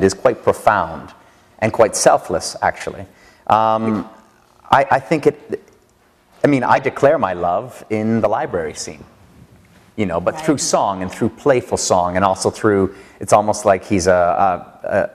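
The audio has four short bursts of corrupt frame decoded, at 3.85 s, 4.87 to 4.91 s, 6.76 to 6.78 s and 10.58 to 10.66 s. Each spans a few frames. Damaged compressed data was decoded anyway, which put energy at the wrong frequencies. The last two bursts are much stronger than the first two. Unlike concealed packet loss, these are added spurious sound rather than a smooth fill.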